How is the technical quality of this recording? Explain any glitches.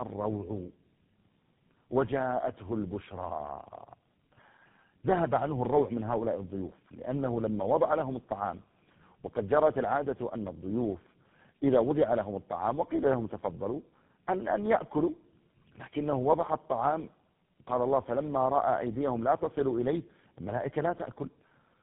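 The quality is poor throughout. Tandem speech coding runs the whole clip: the sound suggests about four narrowband speech codecs in a row, likely ending in GSM full rate. Each one re-codes the previous one's degraded output, so the speech sounds rough, muffled and warbly, with nothing above 3.8 kHz.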